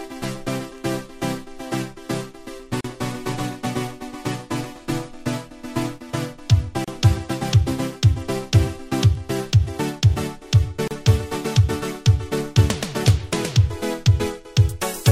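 The audio is broken by three short silences, at 2.81 to 2.84 s, 6.84 to 6.88 s and 10.88 to 10.91 s, spaced 4.0 s apart. This is a gap at a join of encoded pieces. The first lasts 37.6 ms and the others 32 ms. Each drop has its edges smeared by the codec, and the sound resumes exactly where it broke off. The pattern fits 4-second segments encoded separately and joined without trimming each run's start-up delay and padded final frame.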